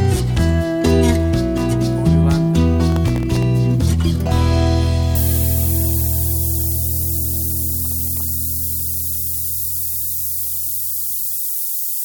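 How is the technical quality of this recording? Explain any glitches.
The recording has two clear technical faults. Processor overload crackle appears at 2.90–3.43 s and again at 7.85–8.21 s. The processor misses a run of very short buffer deadlines, each under a millisecond, and each miss drops a sliver of silence. The result is gritty, tearing crackle. Low bit depth with noise shaping runs from 5.15 s to the end. With only 4 bits, the rounding error is pushed upward in frequency, producing a thin, bright hiss roughly as loud as the sound itself.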